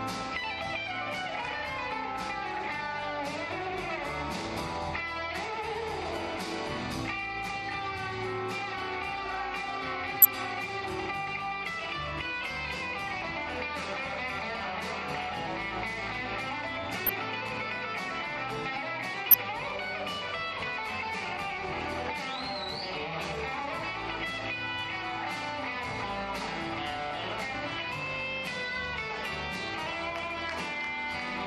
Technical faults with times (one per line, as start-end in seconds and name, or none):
10.21-10.25 corrupt frame decoded
17.06-17.09 corrupt frame decoded
19.31-19.34 corrupt frame decoded